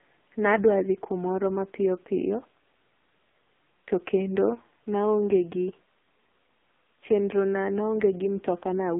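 AMR narrowband mobile codec damage runs through the whole speech clip, from start to finish. The signal has been squeezed into an 8 kHz mobile speech codec that rebuilds the voice from a vocal-tract model fed by a few pulses per short frame, so nothing survives below about 200 Hz or above 3.6 kHz. The damage is heavy: the voice sounds thin, buzzy and synthetic, which points to one of the lowest AMR-NB modes, around 5.9 kbps.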